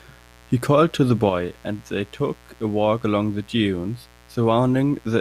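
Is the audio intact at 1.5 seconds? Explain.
No. At 1.5 seconds, as across the whole clip, mains buzz sits under the speech. Sharp switching spikes, twice in every 60 Hz cycle, leak into the signal, producing a steady, raspy buzz roughly 30 dB below the speech. On a spectrogram it shows as evenly spaced horizontal lines at multiples of 60 Hz climbing into the kilohertz range; the waveform carries a regular spiky ripple even between phrases.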